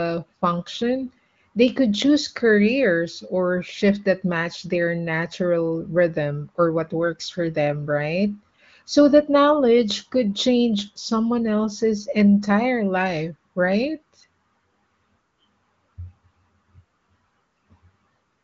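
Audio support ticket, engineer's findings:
No faults found in this speech recording. The AMR wideband (HD Voice) path is audible as a band limit, with nothing above about 7.5 kHz, and the codec leaves at most a faint trace, which fits one of its higher bitrates.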